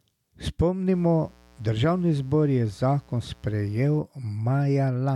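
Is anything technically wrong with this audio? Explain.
Yes, there's mains buzz from 0.94 to 3.99 s: switching spikes twice in every 60 Hz cycle stack up harmonics into a raspy drone about 30 dB under the speech.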